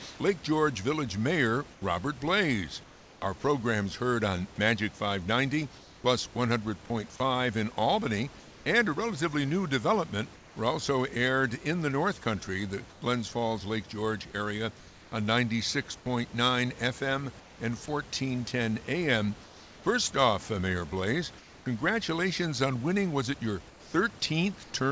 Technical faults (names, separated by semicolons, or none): comfort noise in place of the background; sound chopped by the voice detector; sound dropped by the voice detector